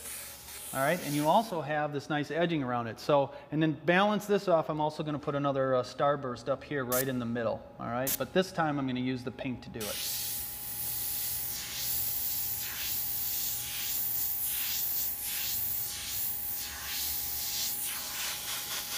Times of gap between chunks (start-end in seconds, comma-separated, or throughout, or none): none